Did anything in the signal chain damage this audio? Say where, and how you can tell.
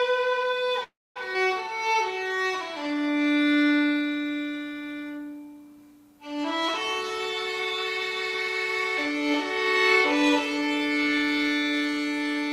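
Yes. A call audio freeze sits at 0.83 to 1.18 s: the last sound smears into a fading buzz, then 0.24 s of silence, and the audio resumes with nothing lost. Packets were likely held up on the network.

A skip ahead at 1.34 s drops roughly 150 ms. Unlike the freeze, there's no gap; the two sides are spliced almost directly and material is missing.

A jitter buffer slow-down runs from 1.73 to 3.24 s at 90% speed, adding 153 ms by repeating pitch periods. Sounds drag while the pitch holds, which rules out tape-style speed drift.

A jitter buffer speed-up shows at 10.22 to 10.81 s (114%, about 100 ms cut) and 11.63 to 12.49 s (108%, about 70 ms cut). Short pitch periods are trimmed, so the audio hurries at unchanged pitch.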